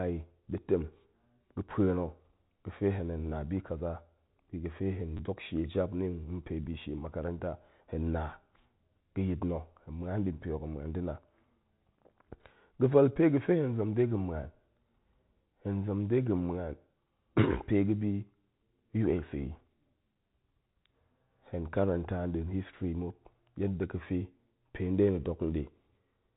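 Packet loss with the last packet repeated occurs at 5.17 to 5.19 s: about 20 ms of the speech stream went missing, and the receiver filled the gap by replaying the last packet it had received. The speech briefly stutters with a mechanical, robotic edge, a gap that fits two lost packets. Through all of this the G.711 telephone coding keeps everything below 4 kHz.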